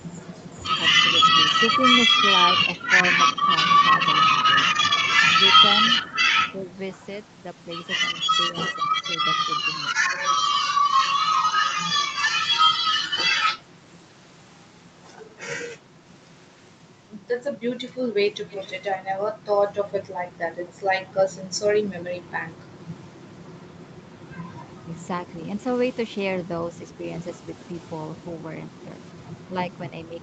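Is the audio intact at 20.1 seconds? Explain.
No. From 18.5 to 20.72 s there is an echo leak: a faint copy of the speech trails the original by about 210 ms, well below the main level. It likely comes from a loudspeaker echo the far end's canceller failed to remove. Unlike reverberation, it is a distinct repeat, not a smooth tail.

Overlapping it, from 19.0 s to the end, the speech is suppressed in double talk: it dips by up to about 10 dB and thins or breaks up. This is likely the canceller turning down its own talker along with the loudspeaker echo. Unlike dropouts, it follows the overlap instead of striking at random.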